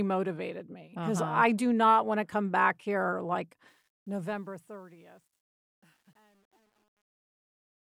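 From 3.68 s, just after "come back here like", the speech's smooth fade-out develops truncation distortion. The level steps fit about 10-bit resolution without dither. From 4.7 s to 7.82 s it is at its worst and sounds gritty, and the waveform shows square steps and the spectrogram broadband hash.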